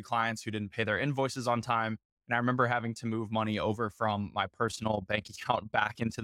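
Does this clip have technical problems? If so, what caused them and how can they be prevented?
Yes. From 4.68 s to the end at 6.24 s, the speech carries overlap-add ripple. The level pulses by about 11 dB, around 30 times a second. This gives a fast, rough flutter, like a robotic tremolo. The audio was split into windowed frames and rebuilt with overlaps whose gains do not sum to a constant. So each frame boundary leaves a dip or bump. To prevent it, pair window shape and hop size so overlapping windows sum to constant gain.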